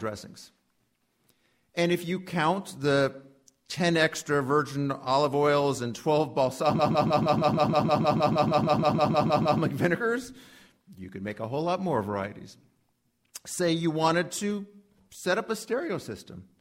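From 6.78 s to 9.60 s the audio falls into a stutter caused by repeated frames. A 156.7 ms block of compressed data was delivered more than once, so the decoder plays that same slice again and again, 18 extra times, restarting roughly every 157 ms. The block length fits a run of about six frames. The loop holds the sound in place instead of letting it move on, and the repeats stretch the clip by 2.82 s.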